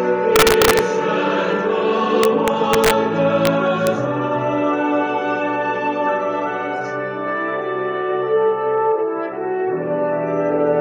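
An integer overflow lets loud peaks wrap to the opposite sign instead of limiting, producing violent cracks at 0.36–0.79 s, 2.23–2.91 s, 3.45 s and 3.87 s, overdriven by about 3, 2, 1 and 0 dB.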